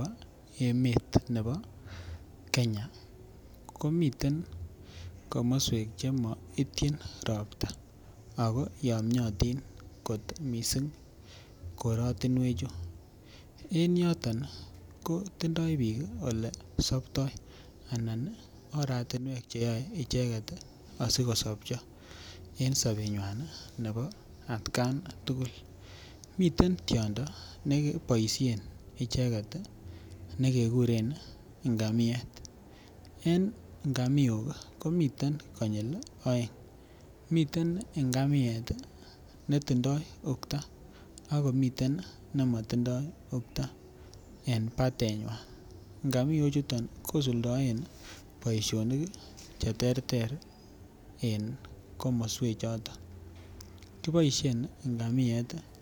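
From 19.17 to 19.61 s, just before "icheket asikosopcho", the speech abruptly drops by about 6 dB, then snaps back. A channel dropout is the likely cause. The waveform shows a sudden step down, and the spectrogram a uniformly dimmer band.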